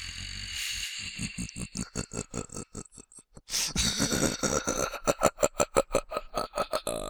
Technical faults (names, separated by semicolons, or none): none